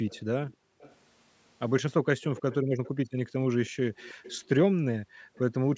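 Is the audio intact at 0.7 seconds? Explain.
No. An echo leak runs from 0.06 to 0.96 s: a faint copy of the speech returns about 0.32 s late, likely because the far side's echo canceller let loudspeaker sound through. Within that span, background gating by the echo canceller from 0.54 to 0.79 s pulls the room sound down by about 40 dB before it returns.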